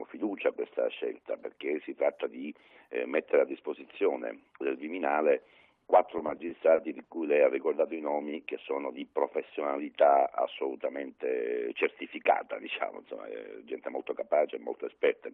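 From 6.17 to 7.12 s the audio hits repeated stalls (stutter): six brief hitches, the longest 60 ms, where late packets starved the jitter buffer and the last sound was stretched, adding 150 ms. Unlike packet loss, nothing drops out; the passage drags instead.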